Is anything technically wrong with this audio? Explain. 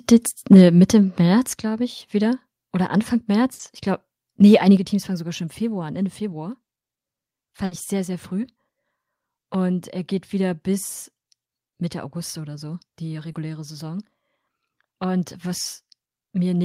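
Yes. The speech has input-level problems near the start and several dropouts from network loss later on.

Microphone overload, 0.52 to 0.63 s: the input gain was likely set too high, driving peaks about 3 dB past the converter's ceiling. Around 7 percent of samples in that stretch are flattened, giving the loud syllables a harsh, crackly edge.

Microphone volume stepped down at 0.54 s, 1.53 s (just before "glaube ich wieder") and 4.77 s (just after "glaube nee"): the call software likely lowered the device's input gain in single steps of about 4, 6 and 7 dB. The voice and background drop abruptly in level each time, the first right on the distorted peak.

Burst of packet loss at 3.53 to 3.61 s and 7.65 to 7.73 s (the second just before "ich sehr sehr früh"): a run of packets was lost or arrived too late. The receiver stretched the last sound for 60 ms while fading it, heard as a held buzz or hiss, then resumed with 60 ms of audio skipped.

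Short concealed packet loss at 13.31 to 13.35 s: about 20 ms never reached the decoder in time. The receiver patched the hole by continuing the preceding sound and then crossfading back, which leaves a brief smear where 20 ms of real audio is missing.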